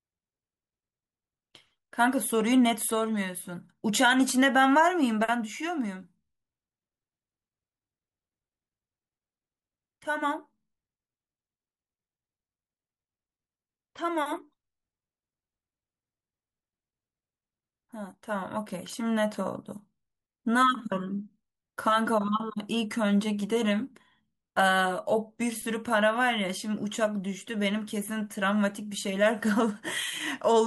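Nothing in this recording stands out as a technical fault, and the speech carries on without any dropout, glitch or interruption along the way.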